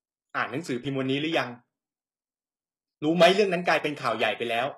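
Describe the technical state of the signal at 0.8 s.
Around 0.8 s the sound has a brief skip at 0.85 s: a few hundredths of a second vanish and the two sides butt together with no silence. This is audio missing between chunks, likely lost while the recorder closed one block and opened the next, which fits a one-second chunk length. Unlike a packet-loss dropout, nothing is filled in or smeared; the material simply jumps.

Running through this moment is HE-AAC compression: the lower spectrum is coded and the treble is rebuilt by copying bands upward, with nothing above 12.3 kHz. The damage is plainly audible as gritty, metallic sibilance. That fits a bitrate around 16 kbps. Unlike plain low-pass band-limiting, the top still sounds bright but synthetic.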